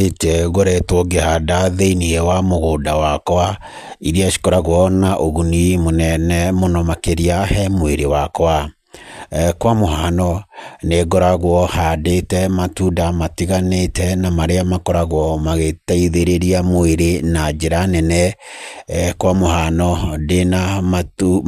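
No technical faults occur at any point in the recording, so there is nothing to describe in time order.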